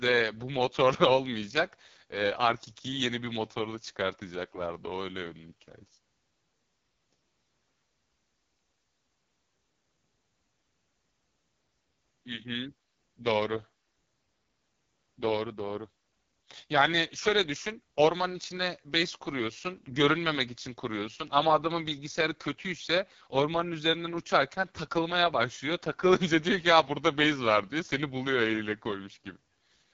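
Throughout, AMR wideband (HD Voice) coding at its lowest rate, likely 6.6 kbit/s, makes the speech rough and raspy; the spectrogram shows noise-filled upper bands ending sharply near 7.3 kHz.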